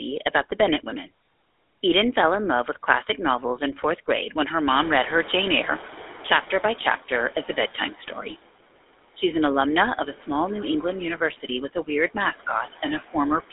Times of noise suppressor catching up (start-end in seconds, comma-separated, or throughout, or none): 4.69-6.99